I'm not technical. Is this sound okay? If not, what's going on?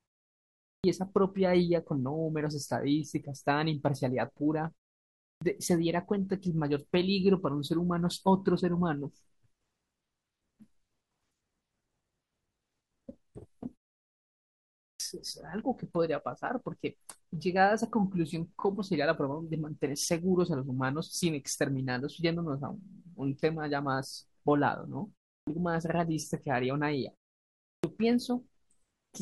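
No. There is a clipped start after a pause at 0.79, 5.36, 14.95, 25.42 and 27.79 seconds. The playback device seems to doze off in silence, so each time about 50 ms of the opening sound is cut off when speech resumes.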